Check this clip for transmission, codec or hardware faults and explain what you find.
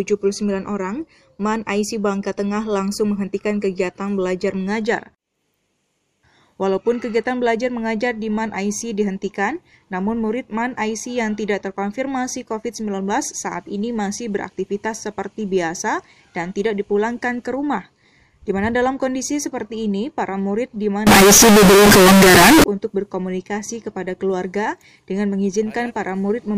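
There is one fault, a float read as integer, from 21.07 s to 22.64 s. For that stretch of about 1.6 s, the sound jumps to a very loud, harsh, nearly square waveform sitting at an almost fixed, high level, with background noise as loud as the main content. The pitch can still be followed. The likely cause is 32-bit floating-point samples being interpreted as 32-bit integers, so each sample's sign and exponent bits, rather than its true amplitude, determine the level.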